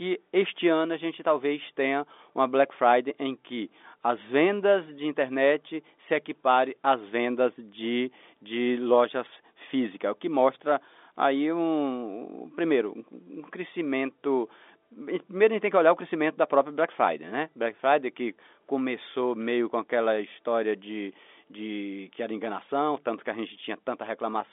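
Nothing stood out on listening to this speech, which carries the narrow telephone band of G.711 coding with nothing audible above roughly 3.7 kHz.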